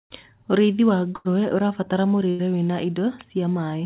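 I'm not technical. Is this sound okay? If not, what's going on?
No. There is a burst of packet loss at 1.16 to 1.28 s and again at 2.30 to 2.42 s. Each time, a short run of the call's data went missing. The receiver smeared the last sound across roughly 90 ms as a fading buzz or hiss, then jumped ahead, dropping about 90 ms of speech.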